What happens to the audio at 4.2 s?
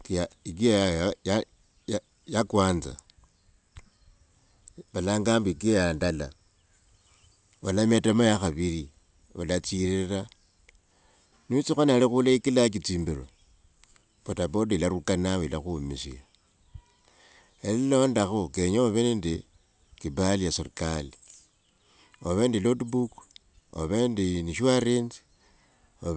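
At 4.2 s the speech carries a faint tick, one of a steady 10 Hz series running through the whole clip, heard only where there is signal. The resampler restarted on every block: each 100 ms block was converted in isolation, leaving a small error at every block edge.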